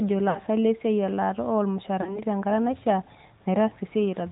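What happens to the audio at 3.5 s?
At 3.5 s the speech still carries the AMR narrowband mobile codec heard throughout: vocal-tract modelling leaves it buzzy and synthetic, mid-rate around 10 kbps, with a spectrogram empty above 4 kHz.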